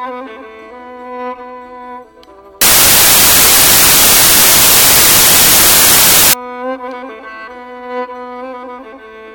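From 2.61 to 6.33 s the music becomes loud, harsh broadband noise: samples built from the wrong bytes, low bits promoted to high, filling the spectrogram broadband.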